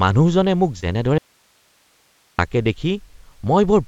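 Short concealed packet loss at 0.80 to 0.84 s briefly smears this speech recording: a few hundredths of a second never arrived in time, so the receiver extended the preceding sound from its pitch or as shaped noise, then blended back into the real signal. Audio dropout to a faint residue follows from 1.18 to 2.39 s: the speech cuts off abruptly for about 1.2 s, leaving only hiss roughly 40 dB below the signal, then returns mid-flow. The likely cause is the wanted signal being lost upstream while the path after the break stayed live. The audio passed through a call path whose content stops at 8 kHz, which fits a wideband codec such as G.722 at 64 kbps.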